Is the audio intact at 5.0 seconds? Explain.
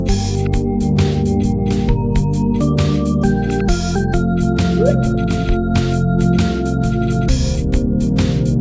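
No. At 5.0 s, as throughout the clip, there is a wrong sample rate fault: the samples play at two-thirds their intended rate without conversion, which fits 24 kHz material run at 16 kHz. Everything sounds slowed to 0.667 times normal speed and about 7 semitones lower in pitch.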